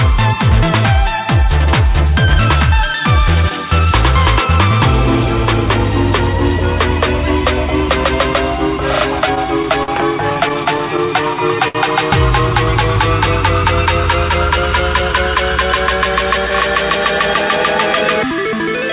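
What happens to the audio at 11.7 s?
At 11.68 s the sound hangs for a moment: the last bit of audio is held and smeared out until about 11.77 s, with a faint buzzy or slightly dipped quality, and then carries on from exactly where it stopped. This is a short stall from a late packet. The next packet missed its slot, the jitter buffer ran dry, and the receiver stretched what it had for about 66 ms. Nothing is lost, but everything afterwards plays about 66 ms later.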